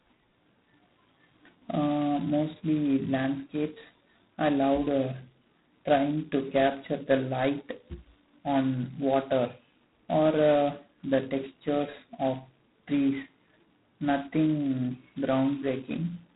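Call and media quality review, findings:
G.726 ADPCM, heavy codec damage, throughout. Coarse adaptive-difference coding, consistent with 16 kbit/s, too few bits per sample to track prediction error. Harsh rasping hiss riding on speech level, rising and falling with it; band stops near 3.9 kHz.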